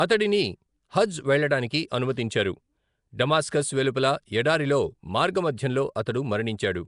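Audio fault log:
Throughout: Nellymoser compression, likely from Nellymoser Asao, with a rough, hissy halo and a smeared, underwater quality to the speech. Bands too weak for the fixed bit budget are refilled with noise, seen on a spectrogram as grainy fill-in and a hard ceiling near 10.6 kHz.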